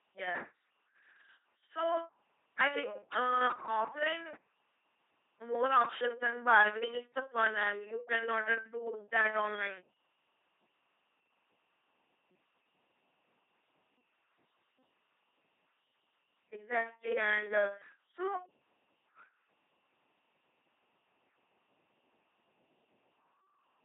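From start to finish the speech runs through an LPC-10 vocoder, which fits a 2.4 kbit/s setting: each moment gets either a buzzy pulse or hiss through a ten-pole filter, so you hear a harsh robotic buzz, wrong-voicing hiss, and nothing above 3.8 kHz.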